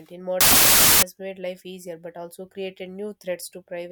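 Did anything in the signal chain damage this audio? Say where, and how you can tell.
Yes: a wrong sample width at the sample-format conversion stage, 0.41 to 1.03 s, ending just before "made life easier but". Loud noise buries the speech, which runs 1.33 times fast, which fits packed 24-bit data read as 32-bit. That speed and pitch shift rules out plain clipping or codec noise.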